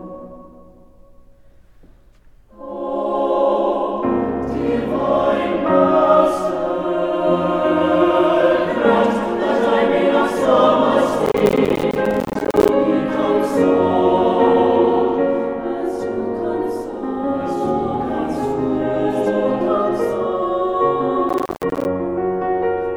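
At 11.26 s there's a burst of processor overload crackle running to 12.69 s, and it comes back briefly from 21.29 to 21.85 s. The machine couldn't fill its small buffers, around 10 ms each, on time, so dozens dropped out as tiny silent gaps with hard edges. Strung together, they give a gritty, tearing crackle over the sound that clears as soon as the load eases.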